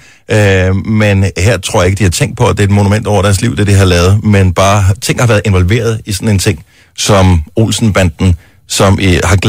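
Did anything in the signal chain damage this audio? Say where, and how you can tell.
Yes, there's hard clipping running through the whole thing. The speech peaks have been driven about 6 dB past what some stage could pass, probably an input gain into the converter or a sample-format conversion that had no headroom left. Only a few percent of samples go over, so it isn't a constant fuzz. You hear a gritty crackle on the louder syllables, where the flattened tops spray harmonics way up into the high end.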